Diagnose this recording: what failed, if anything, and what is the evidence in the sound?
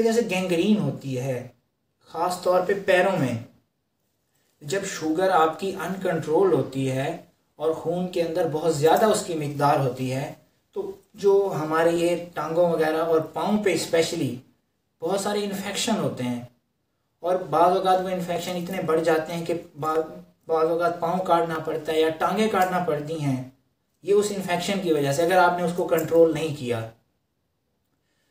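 A short click recurs every 1.6 s while there is signal, from 0.77 s to 27.96 s, about twenty in all. The strict regularity points to the driver or buffer stage, and the likely cause is clock drift buffer slips. Two devices running on separate clocks, mismatched by roughly 200 ppm, let the buffer between them creep until a small block of samples, on the order of 15, is dropped or repeated, leaving a discontinuity at each slip.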